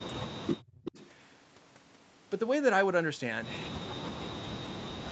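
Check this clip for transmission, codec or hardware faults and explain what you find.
Two kinds of fault are present: speech suppressed in double talk, at the start and again at the end, and a short echo leak near 1 s.

Speech suppressed in double talk runs from 0.0 to 0.97 s and from 3.7 s to the end. The likely cause is the loudspeaker side's echo canceller failing to separate its own talker from the loudspeaker echo while both sides spoke, then turning both down. The speech sinks by as much as about 40 dB during those stretches.

An echo leak appears from 0.85 to 1.09 s. A loudspeaker-side canceller likely failed to remove everything its microphone captured, so a copy of the speech was returned about 253 ms late and roughly 10 dB below the direct sound. It is heard as a brief, faint repeat trailing the original speech. Throughout, the band stops at 8 kHz, which fits a wideband Opus call stream at around 32 kbps.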